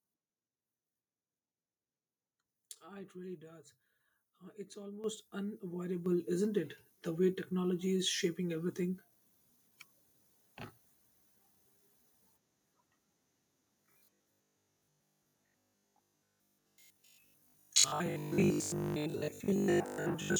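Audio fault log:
5.04 s and 6.06 s: microphone volume stepped up, by about 10 dB and then about 5 dB. Sound and background rise together, so the waveform envelope steps abruptly wider at each point.
13.82–20.38 s: robotic sound from repeated short buffers. A rigid metallic 50 Hz buzz, likely from a repeated 20 ms chunk replacing most of the audio, shows as evenly spaced harmonic stripes on a spectrogram.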